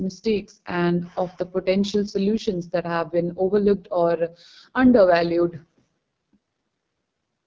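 From start to finish the speech carries the AMR wideband (HD Voice) codec at heavy damage, with a rough, raspy grain that fits its lowest mode, 6.6 kbit/s. The coder rebuilds the lower band from a pulse-driven model and fills the region from 6.4 to 7 kHz with shaped noise. Narrowband AMR would also sound muffled and stop near 3.4 kHz, whereas this band reaches about 7 kHz, below the call processing's 8 kHz ceiling.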